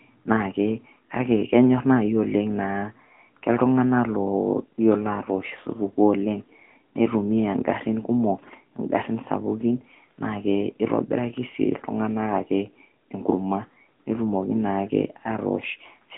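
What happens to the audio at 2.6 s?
AMR narrowband mobile codec damage spans 2.6 s and the whole clip: speech is rebuilt from a vocal-tract model, cut above 3.8 kHz, sounding buzzy and synthetic.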